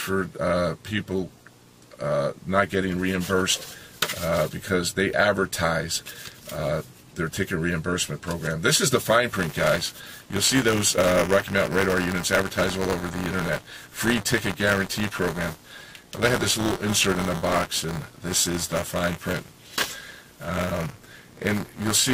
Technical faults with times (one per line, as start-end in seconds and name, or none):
9.34-22.13 buffer tearing